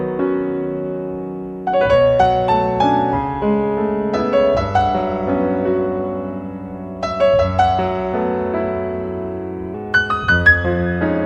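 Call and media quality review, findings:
Section at the wrong speed, 9.74 s to 11.26 s (end of clip). Sound turns abruptly faster and higher: 1.13x speed, pitch up about two semitones, tempo and pitch shifting together. Likely playback or editing stage running the segment against a mismatched sample clock, so it plays out early and raised.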